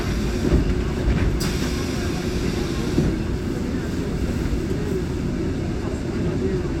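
No technical faults can be heard anywhere in this recording of sounds.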